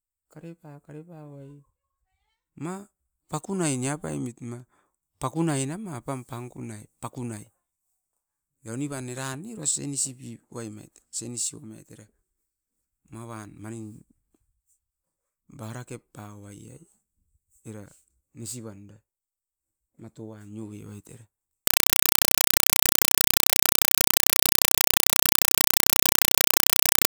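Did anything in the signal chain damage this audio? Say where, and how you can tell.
Yes. From 21.67 s to the end, the speech gives way to very loud, chattering static. This is a compressed stream played as audio, a playback-stage fault. The static comes as 4 ms bursts of noise, each followed by silence, repeating 31.25 times a second. That rhythm fits AC-3 frames, consistent with a 192 kbps Dolby Digital stream, sent over a digital link. The receiver treated the coded data as ordinary samples instead of decoding it.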